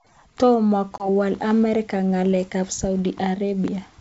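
From about 0.98 to 1.09 s the speech shows packet loss on an ADPCM call: roughly 20 ms, likely a couple of packets, drops to a hard-edged silence. The decoder's predictor and step size then mistrack, so speech resumes with brief distortion before settling.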